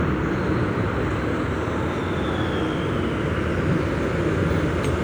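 From start to finish, everything runs fast and high: a classic wrong sample rate. The audio plays back 1.5 times faster, with pitch up about 7 semitones, because nothing converts between rates. The ratio fits 32 kHz material played at 48 kHz.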